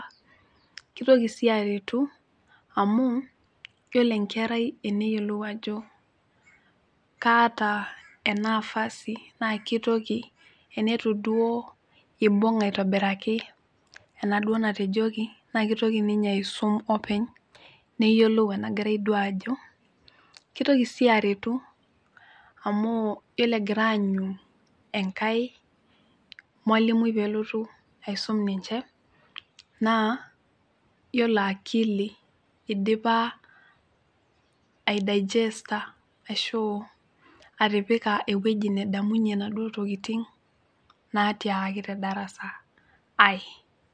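No technical faults are audible anywhere in this speech recording.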